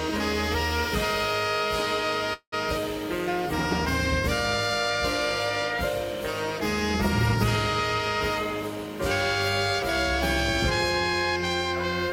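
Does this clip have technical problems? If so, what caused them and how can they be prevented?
Yes. A call audio freeze runs from 2.33 to 2.54 s: the sound stretches into a fading buzz, then goes silent for about 70 ms before resuming. This was likely packets delayed until the jitter buffer emptied. Unlike packet loss, nothing is missing; the audio picks up exactly where it stopped, so everything after runs about 189 ms late. A larger or adaptive jitter buffer and a steadier, less congested network path would prevent it.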